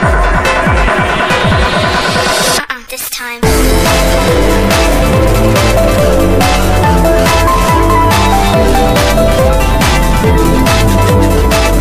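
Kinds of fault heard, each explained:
loose connector crackle: a worn or dirty contact kept making and breaking its connection, chopping the signal into an irregular burst of scratchy crackle from 4.17 to 4.38 s.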